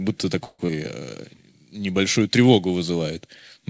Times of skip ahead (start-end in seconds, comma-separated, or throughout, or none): 0.67-0.70